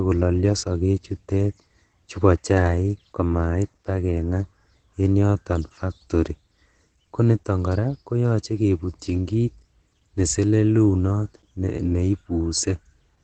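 Throughout the speech, the sound is muffled and hoarse, with heavy damage. Nothing reaches above about 8.9 kHz. This is likely Opus compression in its speech mode. The encoder trims bandwidth and roughens detail, which fits a bitrate near 12 kbps.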